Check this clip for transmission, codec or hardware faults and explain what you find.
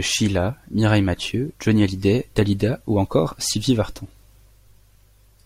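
No transmission, codec or hardware faults can be heard in this speech clip. Nothing in it calls for a fix.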